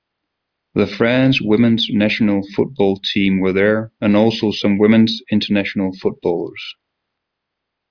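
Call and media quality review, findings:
No faults found in the speech recording. Nothing here needs tracing to a component.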